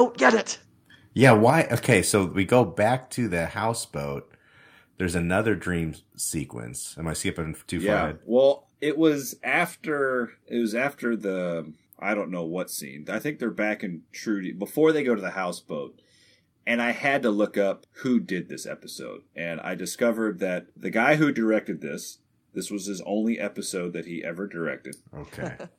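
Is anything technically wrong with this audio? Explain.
Yes, there are two linked problems right near the start.

First, microphone overload. From 1.22 to 1.5 s the speech peaks run about 5 dB over full scale, and a brief second burst at 1.92 to 1.94 s goes about 2 dB over. The tops of those loudest waveform peaks get sheared flat, which gives the speech a gritty, crackly edge. The likely cause is input gain set too hot, so the converter runs out of headroom. The first stretch clips only a small fraction of samples, but the short second one clips a noticeably bigger share.

Then the microphone volume stepped down, twice. At 1.5 s, right as that first distorted stretch ends, everything drops abruptly by about 6 dB, speech and background together. At 2.64 s there's a smaller drop of about 2 dB. That pattern likely comes from the call software reacting to the clipping and pulling the device's input level down in single steps, rather than easing it.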